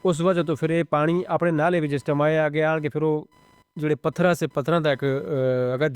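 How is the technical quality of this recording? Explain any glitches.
The recording carries computer activity noise throughout: a buzzing, chirping whine pulsing at roughly 1 kHz, sitting about 35 dB below the speech. Processor or graphics load disturbs the shared audio ground. Unlike steady mains hum, this flickers with computer activity, not with the speech.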